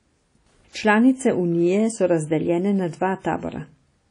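A speech recording that was likely passed through low-bitrate WMA compression, with damage that fits an early WMA encoder at around 32 kbps. Throughout, nothing remains above 10.1 kHz, quantisation noise smears into a ringing, washy haze, and a hiss swells and fades with the speech.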